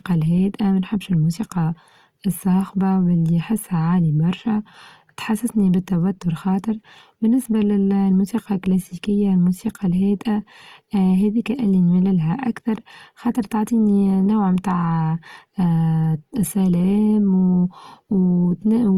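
Throughout, the speech sounds grainy and rough, with noisy textures where tones should be, pointing to plainly audible Opus compression in music mode, likely at about 24 kbps.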